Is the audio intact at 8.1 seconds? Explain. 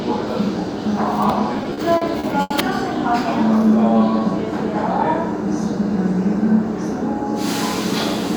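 Yes, the audio at 8.1 seconds is intact, with no dropout, click, distortion or other fault at that moment.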